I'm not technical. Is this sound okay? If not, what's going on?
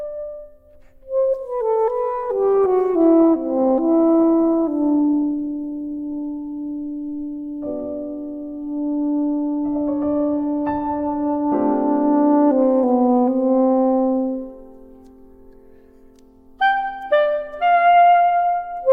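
No. Adaptive stream at a lower bitrate, from 2.23 to 6.23 s: the connection slowed, so a thinner version played, making the sound suddenly rougher with more compression glitches, without any gap.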